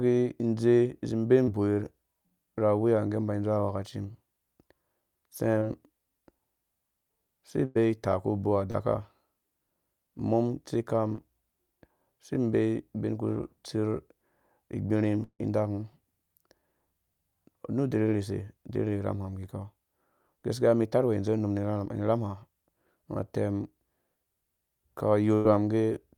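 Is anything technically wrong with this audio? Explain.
Yes. The speech has packet-loss damage at several points.

Short concealed packet loss occurs at 1.43–1.49 s, 5.59–5.63 s, 8.71–8.75 s and 11.15–11.19 s. Twenty to forty milliseconds of audio arrived too late, and the receiver patched each gap by extending the preceding sound, leaving a brief smear or wobble.

A burst of packet loss occurs at 7.65–7.77 s and 25.35–25.47 s. About 100 ms went missing each time. The receiver stretched the last sound into a fading buzz or hiss, then resumed further along with that stretch gone.

A long network dropout at 15.23–15.41 s was likely caused by the stream stalling. The sound continues as a fading imitation for roughly 155 ms, with about 80 ms of it silent, then returns past about 160 ms of lost audio.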